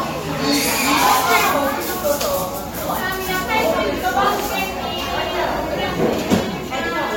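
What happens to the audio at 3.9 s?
Nothing goes wrong at 3.9 s; the sound carries on intact through that moment.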